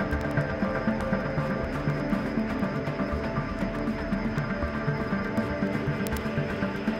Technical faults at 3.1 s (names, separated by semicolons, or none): word clock ticks